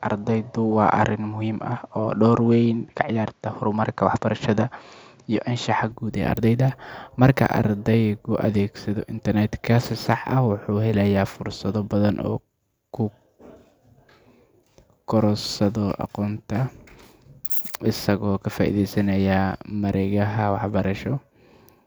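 From the start to 5.92 s the speech sounds dull and boxy, with nothing above 7.6 kHz and a faint noise floor far beneath it. Then it clears, with no gap or jump in level. The likely cause is an input switched to a poorer device with a narrower band.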